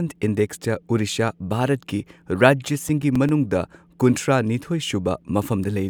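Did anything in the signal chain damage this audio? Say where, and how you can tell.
Yes, at the playback stage. A damaged spot on the disc defeats error correction once per revolution, so the player conceals those samples. This produces CD scratch ticks in the speech: six brief clicks, the longest about 7 ms, evenly spaced from 2.75 s to 3.43 s.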